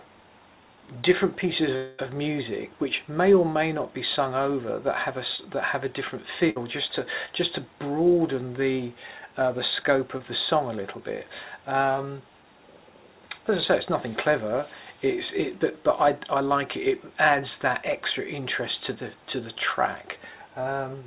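Around 1.76 to 2.00 s the audio stops arriving for about 0.24 s, likely a long network dropout. The receiver carries the last sound forward as a buzz or hiss that fades. It never falls fully silent. When the audio returns, roughly 220 ms of the original is gone. The fill covers the hole but not the lost material.

At 5.36 to 5.40 s there is a short concealed packet loss. About 20 ms never reached the decoder in time. The receiver extends the preceding sound and blends back into the real signal. It is heard as a brief smear or wobble.

From 6.50 to 6.58 s a burst of packet loss removes about 60 ms. The receiver continues the last sound and lowers it as the gap runs on. A held buzz or fading hiss results. The audio resumes further along, with that stretch missing.

Two more short concealed packet losses follow, at 7.26 to 7.29 s and 10.17 to 10.21 s. Each drops about 20 ms. Each is patched the same way, as a quick smear or wobble. 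Throughout, the call codec passes nothing above 4 kHz, which fits G.711 mu-law at 64 kbps.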